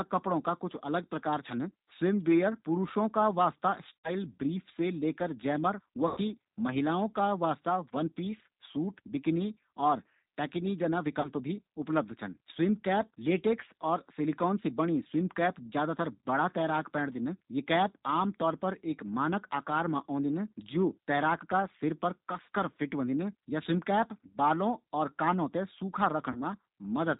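Throughout, the G.729 codec squeezes the speech to 8 kbit/s and removes everything above 4 kHz, leaving it muffled, rough and plainly synthetic. At 3.98 s, 6.08 s, 11.21 s and 26.32 s, VoIP packet loss concealed by the speech codec fills gaps of about 70, 90, 30 and 30 ms with a fading extrapolation, and the speech stays weak briefly afterwards.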